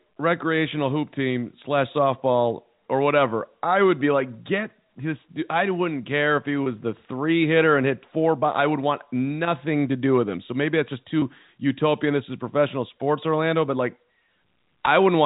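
Speech over G.711 A-law telephone coding at 64 kbps, with packet loss and pitch repetition at 6.64–6.66 s (after "wouldn't care if he", before "the three hitter and") and 11.20–11.22 s (after "maybe that's just"). Each roughly 20 ms gap, consistent with a single lost packet, is bridged by a repeated pitch period, giving a brief held buzz.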